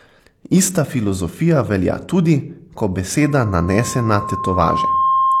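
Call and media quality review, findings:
Loudspeaker feedback squeal, 3.21 s to end of clip, starting right after "filozofija velja tudi ko". Single tone near 1.1 kHz swelling over about two seconds, ending about 5 dB above the speech. Probable component: the mic-to-speaker acoustic path. Mic picks up its own loudspeaker output; loop gain exceeds one at 1.1 kHz, so that tone keeps growing. Loop not broken before the clip ends.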